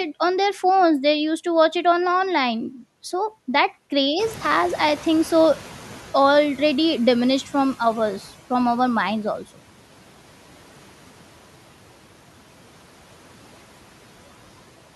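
Around 4 s the room noise jumps by about 17 dB, and from 4.19 to 8.34 s the noise suppressor is catching up, letting it through with less reduction at first before pulling it down about 11 dB.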